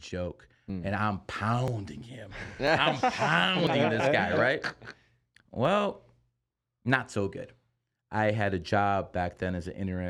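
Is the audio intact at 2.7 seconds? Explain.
No, there's an overlap between stream segments at 2.67 s: overlapping timestamps at a roughly 1 s segment boundary trimmed real speech, so the waveform jumps with a tiny skip.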